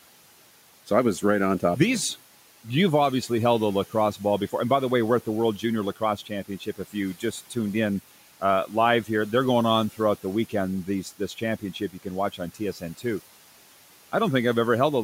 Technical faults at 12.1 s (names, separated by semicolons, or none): speech cut by the noise suppressor